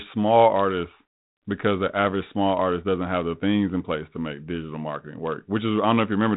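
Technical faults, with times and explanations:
Nothing stood out as a fault on listening to this speech.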